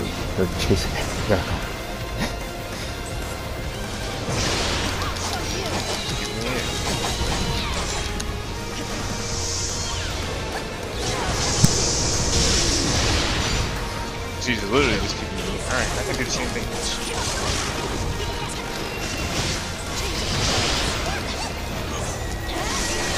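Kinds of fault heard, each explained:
Time-stretched section: software likely squeezed this part by dropping short pieces, so from 17.06 s it runs 1.9 times faster at unchanged pitch, sounding rushed.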